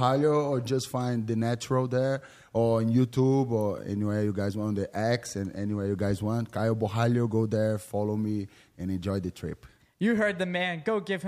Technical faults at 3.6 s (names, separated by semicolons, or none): electrical switching spike